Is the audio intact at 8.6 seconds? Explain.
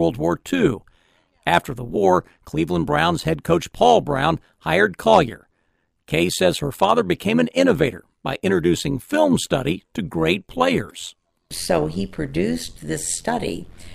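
No. At 8.6 seconds the speech carries overlap-add ripple, as it does throughout the clip. The frames were rejoined with overlaps that don't sum to a steady gain. Level dips by about 11 dB roughly a hundred times a second. This gives a metallic buzz with extra tones around the voice.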